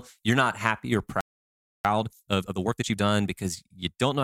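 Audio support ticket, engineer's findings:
Playback stall, likely a player buffer running dry or a blocked output thread. Output silent from 1.21 to 1.85 s, about 0.64 s, cutting speech off mid-flow right after "you're not happy or". Sound continues once data flow recovers.

Time-compressed catch-up, as the player works off its backlog after the stall. Small segments removed and cross-faded from 1.85 to 3.13 s, running at 1.5x speed. Speech comes across hurried but keeps its normal pitch throughout that stretch.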